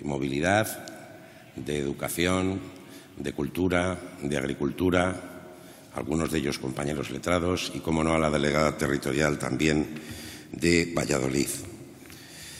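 At 10.93 to 10.97 s, compressed frames are skipped: about 20 ms of audio vanishes, and the audio jumps ahead at that point.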